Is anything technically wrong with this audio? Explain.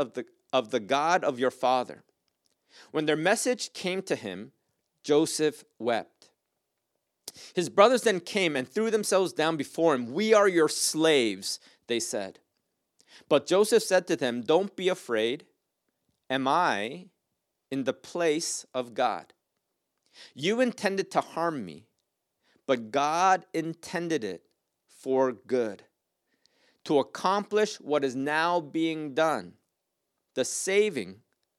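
No, nothing technically wrong can be heard here.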